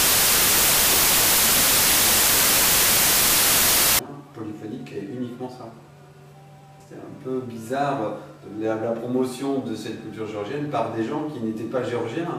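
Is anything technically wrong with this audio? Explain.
Yes. From 0.0 to 3.99 s the audio suffers a wrong sample width fault. The sound points to packed 24-bit samples being read as 16-bit, so many values are built from mismatched bytes and only some keep the genuine top byte. It plays at 0.667 times speed, noticeably lower in pitch, with the real signal faint under loud harsh noise. A waveform shows a dense, loud block; a spectrogram shows broadband noise with a stretched, downshifted trace of the sound inside it.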